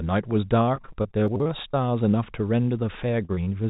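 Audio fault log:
0.66–1.75 s, repeated packet loss (robotic sound): eleven separate gaps, the longest about 24 ms, are each patched by extending the preceding sound. Roughly a fifth of this stretch is concealed rather than received, so the speech turns choppy, with small pieces missing between the patches.
1.28–1.40 s, chunks out of order: within that damaged stretch, a 40 ms chunk plays two chunk-lengths later than it should. No audio is lost, but the sequence is scrambled and the three hard joins produce a brief jumbled moment.
3.25–3.49 s, short concealed packet loss: three holes of about 20 ms each, starting at 3.25, 3.35 and 3.45 s, are filled by continuing the last sound and blending back into the real signal. Each is heard as a quick smear or wobble, and a short consonant may drop out.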